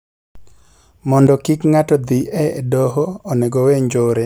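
A gain setting was likely applied without any ramp at 1.27 s, producing a sudden gain jump: the level steps down by about 6 dB between one sample and the next and stays there to the end, so the speech and its background noise drop together at once.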